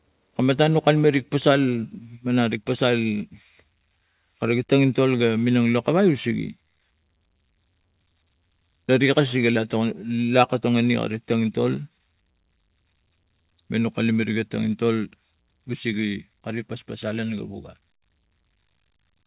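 No faults are audible; the speech arrives over a call path with nothing above 4 kHz, consistent with G.711 A-law telephone coding at 64 kbps.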